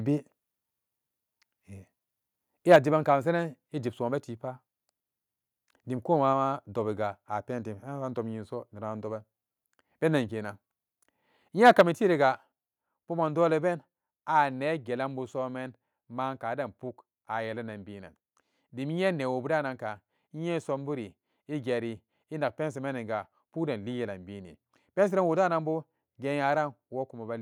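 A speech recording with two harsh, crackling bursts of microphone overload at 2.71–2.76 s, just before "jiban ka masenen", and at 11.65–11.81 s, where peaks run about 3 to 4 dB past the converter's limit. The cause is likely a converter driven too hard, and the waveform shows flat-topped peaks on a noticeable fraction of samples. Right after each burst, at 2.76 s and 11.81 s, the voice and background drop by about 3 dB in a single step. This is likely the call software stepping the microphone volume down, and it shows as a sudden lower envelope on the waveform and a uniformly dimmer band on the spectrogram.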